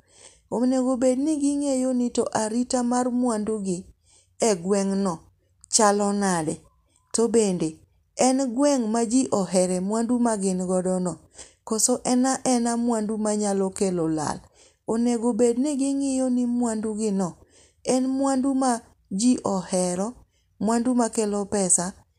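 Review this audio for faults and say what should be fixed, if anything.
Nothing needs fixing; no faults can be heard.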